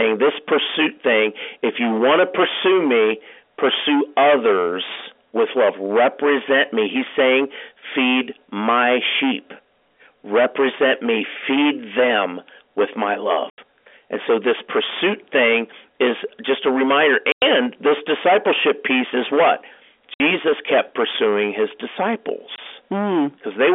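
Hard clipping runs through the whole speech clip. The signal is driven about 20 dB past what the stage can pass, so roughly a fifth of the samples are sliced flat. The flat tops throw harmonics upward, and every loud syllable carries a harsh, gritty fuzz rather than occasional crackle.

Packet loss filled with silence cuts four holes into the audio: 13.5 to 13.58 s after "them with my", 17.32 to 17.42 s between "is just a reminder" and "this discipleship piece is", 20.14 to 20.2 s between "discipleship piece is what" and "kept pursuing his", and 22.56 to 22.58 s. The gaps last 80, 100, 60 and 20 ms, which fits 20 ms packets dropped and replaced by silence. Each has abrupt edges, all within the narrow telephone band of the G.711 coding.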